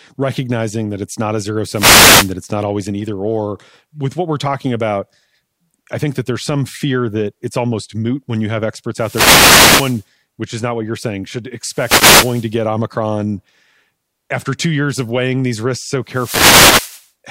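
Four wireless microphone noise hits land in this speech: 1.72 to 2.33 s, 8.95 to 10.06 s (right after "moot when you have", clearing by "which is not what"), 11.63 to 12.55 s after "what you're saying should", and 16.05 to 17.09 s after "weighing these risks so". Each time the FM radio link fades as reflections cancel, the receiver's noise climbs, and you get a burst of static washing over the speech for about 0.6 to 1.1 seconds.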